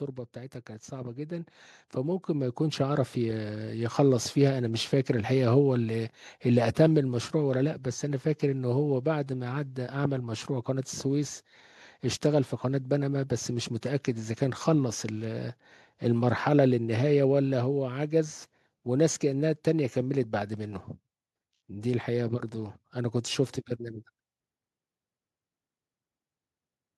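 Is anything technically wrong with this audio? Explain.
Yes. Automatic gain rising runs from 0.33 to 3.94 s: the gain control judged the input too quiet and raised its gain by about 10 dB over those seconds, so the speech and the room background swell upward together rather than the talker getting louder.

Automatic gain falling follows from 3.99 to 8.97 s: the control judged the level too loud or its background too strong and pulled its gain back down by about 4 dB, so the speech starts loud and then sinks gradually, with the background sinking right alongside it.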